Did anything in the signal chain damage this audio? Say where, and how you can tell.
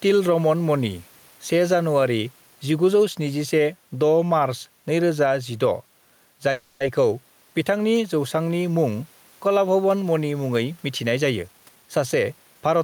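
Yes. Throughout the speech, the faint room noise, sitting about 39 dB below the voice, swells in every pause and sinks under each loud syllable, a swing of about 5 dB. This is gain pumping at the input stage, likely an input gain set too high with a fast limiter clamping down on peaks.

From 6.51 to 6.82 s the sound stalls and the last fragment carries on as a fading buzz or hiss for about 290 ms before speech resumes where it left off. This is a call audio freeze in the network path: delayed packets likely drained the jitter buffer, so filler was inserted without losing content.

From 11.12 to 12.78 s, right after "कलाभवन मणि मुङै", the speech turns hurried, running about 116% of normal speed at unchanged pitch. This is a jitter buffer speed-up: the receiver had built up excess delay and trimmed roughly 300 ms by repeatedly cutting out pitch-period-sized slices.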